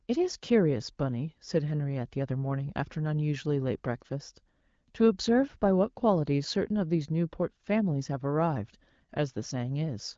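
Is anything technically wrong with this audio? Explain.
No, nothing is technically wrong with this audio.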